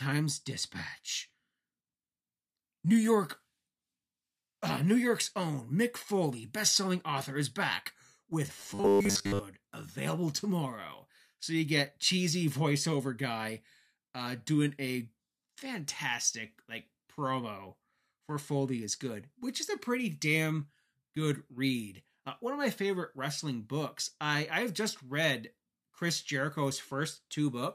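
Robotic sound from repeated short buffers hits this speech from 8.57 to 9.39 s, between "author is back with" and "available tomorrow": a rigid metallic buzz at 100 Hz, likely from one 10 ms buffer replayed over most of that span.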